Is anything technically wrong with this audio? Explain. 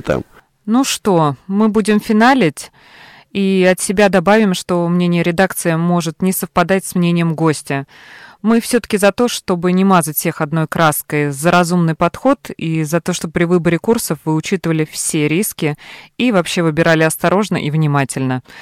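Yes. Hard clipping throughout: overdriven by about 9 dB, around one percent of samples are cut flat, adding high harmonics that crackle on speech peaks.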